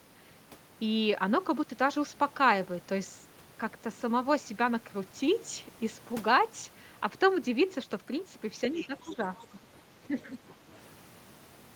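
At 8.75 to 8.87 s a faint second voice slips in under the talker, about 15 dB below the main speech, and again more faintly at 9.03 to 9.09 s, around 25 dB down. This is the other side's voice leaking through: the far end was likely playing over the talker's loudspeaker, and the echo canceller left some of it in the microphone signal.

Overlapping that, from 8.86 to 9.7 s, the talker's own voice sinks in patches adding up to about half a second, dropping by roughly 15 dB at its deepest. From 9.89 to 10.39 s it dips again, by around 10 dB over some 400 ms. This is speech suppressed in double talk. Both sides were likely talking at once, and the echo canceller, unable to tell the talker from the returning echo, turned everything down together.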